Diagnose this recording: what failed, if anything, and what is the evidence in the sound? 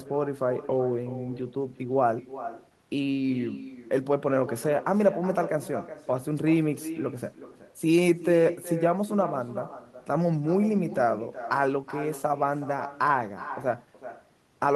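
Echo with no canceller, throughout: a quieter, thinner copy trails the speech by roughly 400 ms, about 13 dB down, as far-end loudspeaker leakage escapes call processing.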